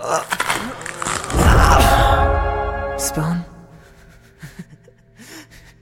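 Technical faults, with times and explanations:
Nothing stood out as a problem on listening.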